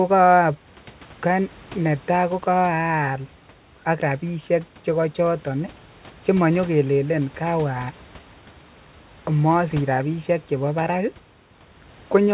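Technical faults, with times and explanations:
No technical faults are present in this speech: the audio carries nothing above 4 kHz, which fits a G.711 mu-law call path at 64 kbps, and the background room noise sits about 28 dB below the speech.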